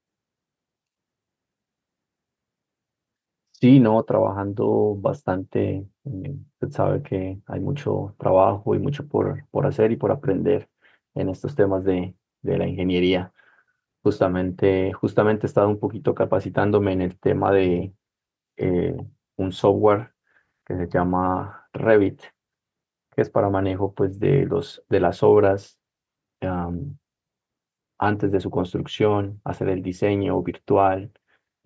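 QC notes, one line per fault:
Nothing stood out on listening to this speech, which has passed through a call's microphone processing, so its lowest bass is trimmed and nothing reaches above 8 kHz.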